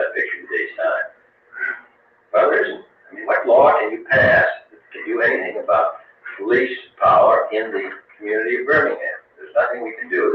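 Across the whole clip the level pumps and flutters, with sustained parts and decays thinning out while sharp onsets survive. This is a noise suppressor applied to music or sounds: a speech-oriented suppressor treats steady content as noise, swinging gain by roughly 20 dB.

The sound cut by the noise suppressor shows up as distinct dips, with held portions sinking by about 17 dB and tails shortened. The longest runs from 0.37 to 2.33 s. Shorter dips follow at 2.78 to 3.18 s, 4.58 to 5.01 s, 5.96 to 6.4 s, 6.79 to 7.01 s, 7.89 to 8.24 s and 9.15 to 9.55 s. A milder drop of about 9 dB comes at 9.91 to 10.12 s. Each time, the suppressor judged the sustained material to be noise and pulled it down. The call path's band limit leaves nothing above 8 kHz.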